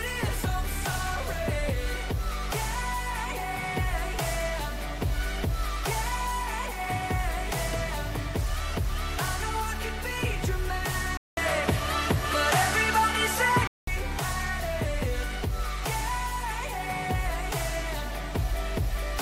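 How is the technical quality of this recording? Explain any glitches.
There is one glitch. From 11.17 to 13.87 s the sound goes duller after a 200 ms gap, nothing above 13 kHz, level shifting a few decibels, new faint noise: likely an input switched to a poorer device.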